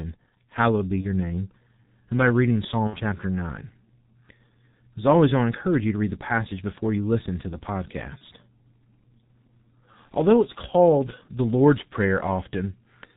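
From start to finish the speech has the squeezed, hoarse quality of the G.723.1 codec, and it's heavy here. Nothing comes through above about 4 kHz, so everything sounds muffled, and consonants smear together because the coder's model of the voice only catches up every 30 ms frame. The thinness is consistent with the roughly 6 kbit/s mode.

On top of that there's VoIP packet loss concealed by the speech codec, three times. Around 1.01 to 1.06 s about 30 ms goes missing, which sounds like one lost frame. The decoder keeps extrapolating from the last pitch and filter it had, so you get a short fading stretch of buzz or coloured noise instead of real speech, and the voice stays a bit weak just after. The longest gap is at 2.87 to 2.97 s, roughly 60 ms, pointing to two frames in a row. The tone drags out and decays more noticeably there. At 8.18 to 8.23 s another 30 ms gap gives the same brief fading fill.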